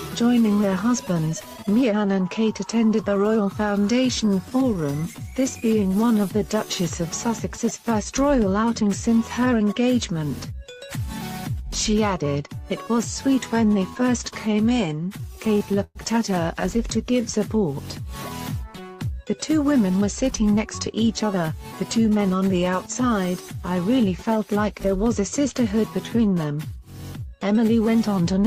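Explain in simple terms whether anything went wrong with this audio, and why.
Several things went wrong, all tied to how the audio travelled over a network.

From 3.87 to 5.57 s there are scattered short gaps. Small pieces of the audio arrived late or went missing, about fifteen of them. Each hole was tiny, no more than about 20 ms. The receiver covered each one by stretching the last bit of sound it had. Nothing is really lost, and only about 6 ms of extra time creeps in. You hear ticks or little hiccups in an otherwise clear stretch.

From 5.83 to 6.66 s there is a jitter buffer slow-down. The receiver keeps a small reserve of audio to smooth out delays, and here that reserve was running low or the receiver had just decided to keep a bigger one. To refill it, the receiver repeated tiny slices of the sound over and over. That stretch plays at about 90% speed and adds 91 ms. The pitch stays the same, but sounds feel drawn out.

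There are two jitter buffer speed-ups, from 8.64 to 9.69 s and from 19.32 to 22.19 s. This time the reserve held too much audio, so the receiver trimmed out tiny slices to catch up. Both stretches play at 106% speed. The first loses under a tenth of a second. The longer second one loses about a fifth of a second. The pitch does not change, but the sound feels slightly rushed.

From 14.70 to 15.97 s there are repeated stalls, heard as a stutter. Audio kept arriving late, so the reserve ran dry seven times. Each time the receiver held the last sound until fresh audio came in. The longest wait is 111 ms, and the fills add up to 175 ms. That is 14% of this stretch. Nothing is missing, but the sound drags and stumbles.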